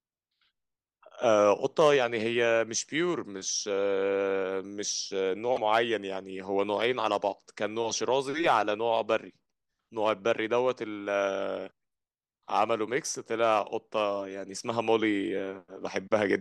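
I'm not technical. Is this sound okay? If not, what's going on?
No. There's a broken MP3 bit reservoir glitch in this speech from 5.55 to 5.58 s, a split-second spot where the audio skips ahead and comes out as a chirp, a burst of noise or a short gap. MP3 files save space by letting each small chunk of audio borrow room from the chunks before it. Here a piece of the file was likely lost, so the next chunk reached back for its borrowed data and found the wrong bytes. The glitch's length fits one MP3 chunk of about 26 milliseconds.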